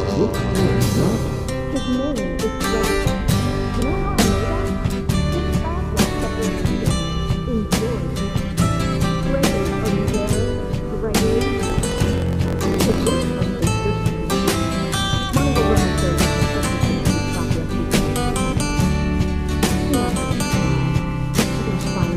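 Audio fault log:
11.63–13.11 s, block size mismatch (truncated): the tail of each written block, which fits 1024-sample writes, is discarded, so a 45.9 Hz buzz appears and audio runs 1.07 times fast at about normal pitch.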